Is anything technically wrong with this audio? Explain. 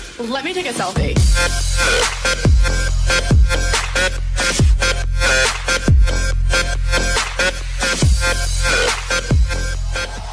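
No, nothing here stands out as technically wrong; it all sounds fine to my ear.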